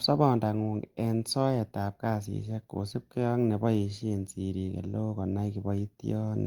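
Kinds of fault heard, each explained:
No technical fault can be heard in this speech clip. There is nothing here to list under any kind.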